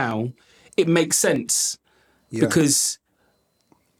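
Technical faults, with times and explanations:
0.11 to 3.86 s, periodic USB or driver dropouts: Regular ticks sound in the speech every 0.25 s, about fifteen in all. Each time, something blocks the audio path briefly. About half a millisecond is skipped, and the sudden splice makes a click.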